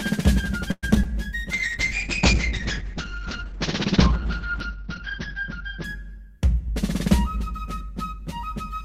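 From 0.71 to 0.85 s, packets were likely held up and the jitter buffer ran empty. The music stretches into a fading buzz with about 30 ms of silence, a call audio freeze that adds roughly 113 ms of delay before resuming where it stopped.

At 0.95 to 0.97 s and 1.03 to 1.06 s, short concealed packet loss hides about 20 ms and then 40 ms that never reached the decoder. Each gap is bridged from the preceding sound and heard as a brief smear or wobble. The second also trims back some of the built-up delay.

From 1.53 to 6.72 s, a call bitrate drop cuts the encoder from 48 to 6 kbps, spending about 2.8 s at the lowest rate. The audio bandwidth shrinks from 20 kHz to 6 kHz, so the music turns muffled, rough and watery.

From 6.60 to 8.81 s, the jitter buffer held surplus audio and trimmed about 70 ms in small pitch-period slices. This jitter buffer speed-up plays the music around 3% faster at unchanged pitch, so the tempo drifts ahead.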